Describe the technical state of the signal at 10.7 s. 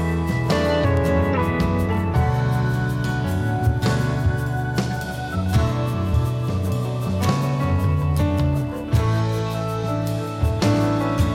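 At 10.7 s the signal is intact, with no audible fault at that point.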